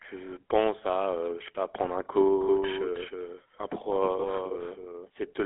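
Throughout, the speech shows GSM full-rate codec damage: a buzzy, gravelly roughness with nothing above 3.8 kHz, consistent with a 13 kbps phone link.

From 2.41 s, after "sais pas prendre un", a doubled audio track starts abruptly. A dry copy about 5 dB quieter trails by roughly a third of a second. A second capture path is the likely cause.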